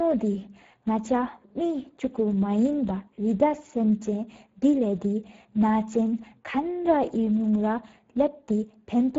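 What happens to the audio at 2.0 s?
At 2.0 s, channel delay (comb filtering) is present, as it is through the whole clip. One channel runs a tiny fraction of a millisecond behind the other, only a few samples, and when the two are folded to mono the shared content cancels where the offset puts them in opposite phase. With so short a lag, the first notch sits high, around 5 kHz, which leaves a hollow, phasey edge on the speech.

The Speex codec damage is also there at 2.0 s, running the full length of the recording. This CELP speech coder has too few bits to describe the excitation properly here, consistent with a rate near 10 kbps, so the speech comes out noisy and hoarse, with plainly audible roughness. Nothing survives above about 7.7 kHz, which adds to the dull quality.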